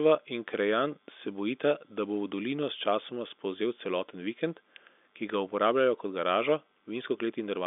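Nothing in this speech recording stands out as a technical fault. It carries the narrow sound of G.711 telephone coding, with the line band running from about 250 Hz to 3.6 kHz and nothing present above 3.7 kHz.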